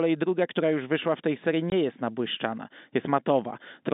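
At 1.70 to 1.72 s, between "wyszła w tej serii" and "jest nabłyszczana", the speech drops out abruptly for about 20 ms, leaving a short dead gap. This is packet loss filled with silence: one packet's worth of audio, which fits a 20 ms packet, never arrived, and the receiver played silence in its place. Around the hole, the narrow telephone band of the G.711 coding stays audible.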